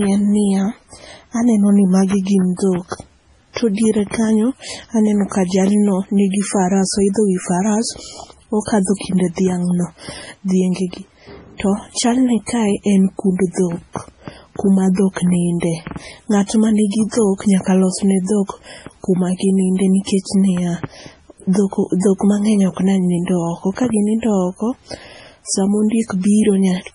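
The encoder was likely running short of bits under MP3 compression, heavy enough to fit a very low bitrate near 24 kbps, and this lasts the whole clip. With so few bits it cuts everything above 10.6 kHz and drops weaker frequency detail, which flickers in and out from frame to frame. The speech sounds dull and watery, with a swirling, metallic edge on s sounds and consonant onsets smeared rather than crisp.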